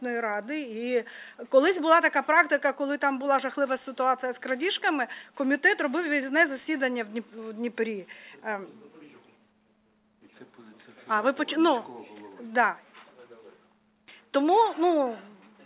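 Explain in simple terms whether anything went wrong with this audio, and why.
Nothing went wrong with this recording: there are no technical faults to point to at any moment.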